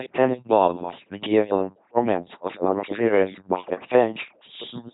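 Throughout this short speech clip the voice has a buzzing, mechanical robot quality, with harsh buzz or hiss breaking in wherever a sound is classed the wrong way, and nothing is heard above 3.8 kHz. This is LPC-10 vocoder damage, and it is heavy. Each moment is rebuilt as either fully voiced, driving a simple vocal tract filter with a pulse train, or fully unvoiced, driving it with noise. Such crude coding fits a 2.4 kbit/s rate.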